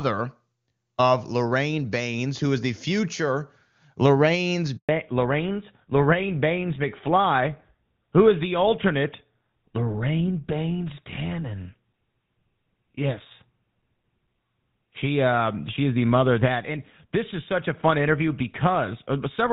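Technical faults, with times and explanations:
4.77 to 4.89 s, handover gap: the call switched between networks and no speech frames arrived for about 120 ms, so the speech fades out within a few tens of milliseconds and stays silent until the new link starts carrying audio, losing whatever was said.
4.89 s to the end, fallback to narrowband: after the handover the call dropped from HD Voice, whose clean wideband sound before the gap fits AMR-WB near its top rate, to an older narrowband codec, consistent with GSM full rate. Nothing above 4 kHz remains, so the speech turns duller and rougher.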